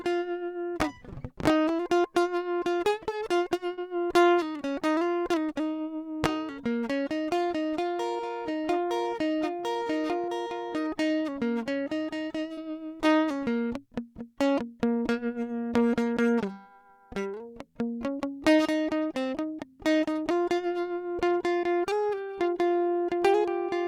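Short concealed packet loss hits the music five times, at 3.73, 9.71, 12.53, 20.43 and 21.59 s. Each time about 40 ms (20 ms at 20.43 s) arrived too late, so the decoder stretched the preceding sound before blending back, leaving a quick smear or wobble.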